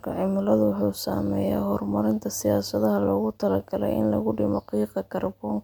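Nothing technically wrong turns up in this short bit of speech; it's a recording with no faults to point to.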